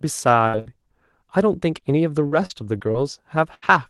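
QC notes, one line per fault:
0.47–0.55 s and 0.59–0.70 s, burst of packet loss: each time roughly 60 ms is stretched from the last sound, fading to a held buzz or hiss, then about 60 ms is skipped, with around 8 ms added in the second. Spectrogram shows smeared, fading horizontal bands, then an abrupt join.
0.53–0.55 s and 0.65–0.67 s, lost packet rebuilt from error correction: a 20 ms frame in each burst is played from the low-bitrate copy in the next packet, so there is no hole but a rougher, noisier patch. Spectrogram shows a short grainy slice with a raised noise floor and blurred harmonics.
1.60–3.68 s, repeated packet loss (robotic sound): seven separate losses, the longest 76 ms, each patched by extending the previous sound, about 240 ms in total, or 12 % of the stretch. About a tenth of a second comes back from error-correction copies. About 240 ms of the original is skipped. The result is choppy. 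The waveform shows repeated flattened, decaying segments and sudden jumps. The spectrogram shows frozen harmonic stripes interrupting normal speech texture, all within the roughly 12 kHz band of the Opus call path.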